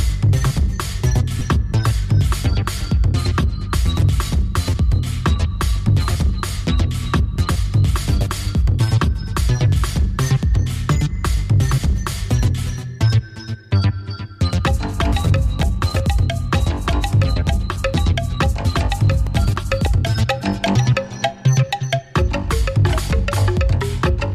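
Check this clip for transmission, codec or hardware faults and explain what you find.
There are two short dropouts from lost LE Audio frames. The first runs from about 1.39 to 1.41 s, a gap of roughly 22.5 ms, which fits three 7.5 ms frames going missing in a row. The second is a single frame of about 7.5 ms at 5.88 s. Each time, the LC3 decoder fills the hole by replaying the last good spectrum with scrambled phase signs, so tonal content briefly turns into a grainy, noisy smear. The light lossy coding of the stream is working as expected.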